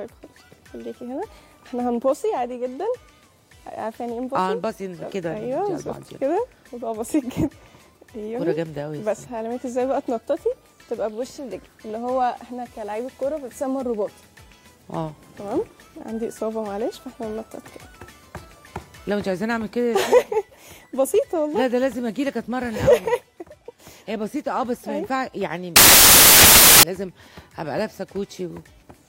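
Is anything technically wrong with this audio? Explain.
Yes. Samples built from the wrong bytes, 25.76 to 26.83 s: misassembled bytes turn the fast-changing low bits into each value's large part, so a burst of loud, harsh broadband noise covers the sound.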